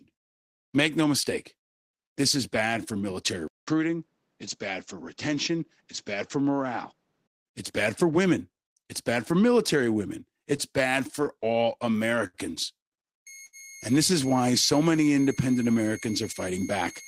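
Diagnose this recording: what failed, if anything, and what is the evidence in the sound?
At 3.48 s, after "is bad for military", the audio drops out for 200 ms. It returns about 5 dB quieter, narrower in band, with a new noise floor roughly 45 dB under the speech. It stays dull and boxy until 7.47 s, just before "it's bad for women". This is an input switched to a poorer device. The likely cause is that the capture driver changed to another microphone or a headset call profile and then changed back.

From 10.39 s to 12.37 s, just after "bad for military women", the speech stutters and drags. About ten brief holds, 170 ms in total and none longer than 67 ms, are spread across the span. Nothing is lost. This is repeated stalls (stutter) at the network and jitter-buffer stage. Packets kept arriving late, so the buffer ran dry again and again. Each time, the receiver extended the last sound until data resumed.

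From 13.27 s to the end, a thin whistle sits about 20 dB below the speech. Its pitch wanders between 2.13 and 2.18 kHz. This is a switching supply whistle from the analogue power side. A switch-mode supply has dropped into an audible burst mode, or it is beating against another supply. Its frequency shifts as the load changes, and that coupling reaches the audio path.

At 13.46 s one sound is held too long, for 72 ms until 13.56 s, with a slight buzz or dip. No speech is missing afterwards, but playback resumes 72 ms later. This is a short stall from a late packet on the network path. The jitter buffer emptied while one packet was overdue, so the receiver stretched the last sound. When the packet arrived, playback continued from the same place.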